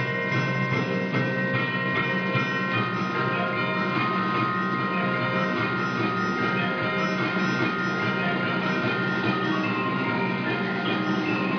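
No technical faults detected.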